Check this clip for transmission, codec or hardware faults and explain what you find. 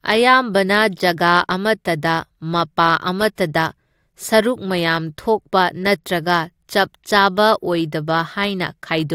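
No faults found; the speech runs continuous and intact throughout.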